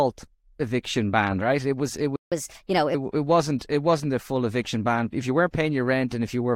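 Speech, interrupted by a playback stall right after "was it": from 2.16 to 2.32 s the output drops out for about 156 ms, likely because the player ran short of buffered data, leaving a flat gap in the waveform and a blank vertical band on the spectrogram. Then comes catch-up at higher speed, from 2.32 to 2.94 s, ending before "it wasn't it wasn't". The backlog plays at 1.25 times normal speed, raising pitch by roughly four semitones. On a spectrogram the harmonics shift upward and sit compressed in time, then return to normal spacing.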